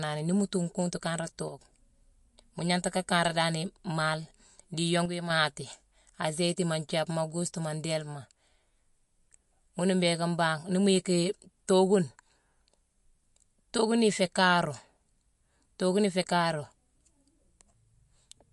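Throughout the speech there is plainly audible MP3 compression damage. Nothing reaches above 11.3 kHz. The sound has a watery, swirling quality as weak detail switches on and off. The likely cause is MP3 coding at a low bitrate, near 49 kbps.

From 1.48 to 1.59 s, and again from 5.06 to 5.30 s, the level drops abruptly by about 6 dB, then returns. These dips are likely cases where one channel drops out, leaving half the mixed signal.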